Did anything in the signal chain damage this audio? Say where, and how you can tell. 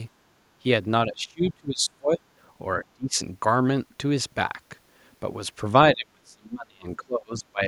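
Yes. The speech is suppressed in double talk at 1.07 to 2.2 s, 2.78 to 3.19 s and 5.93 to 7.61 s, dipping by as much as about 25 to 30 dB. This likely comes from call processing, where the echo canceller ducked the talker along with the far-end echo.

The other side's voice leaks through briefly at 1.46 to 1.5 s, about 20 dB below the talker, during the first suppressed stretch. The echo canceller likely left residual loudspeaker pickup in the microphone path, so a short fragment of the far-end audio survives.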